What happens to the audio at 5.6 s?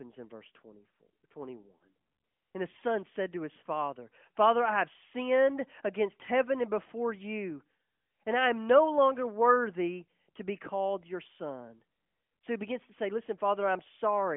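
Nothing goes wrong at 5.6 s: the speech runs on intact through that moment, carried as before through the narrow telephone band of the AMR narrowband mobile codec.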